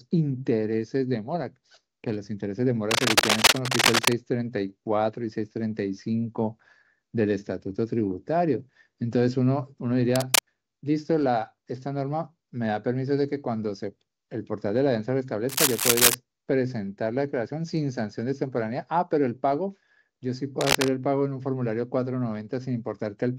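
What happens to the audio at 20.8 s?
From 20.61 to 20.89 s, a burst of cable scratch noise rasps over the sound at roughly its own level, likely from a worn cable or connector whose contact resistance jumps as it moves. A spectrogram shows dense, ragged broadband streaks, and the waveform shows jagged spikes.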